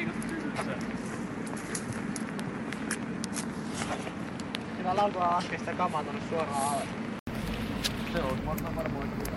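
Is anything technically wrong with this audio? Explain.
Yes. From the start to 7.27 s, the sound is dull, with nothing above 11.4 kHz and a faint noise floor. An 80 ms silence follows. Then the band opens up. The input was likely switched to a poorer, narrower-band device.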